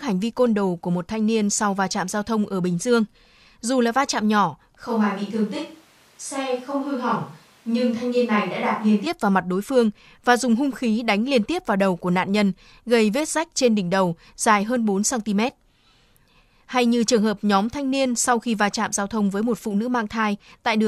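Speech: between 4.87 and 9.06 s the close microphone's signal likely drops out, causing a switch to a distant microphone. The voice abruptly turns roomy and hollow with thinner bass, at roughly the same level, with room noise about 35 dB below it, then snaps back.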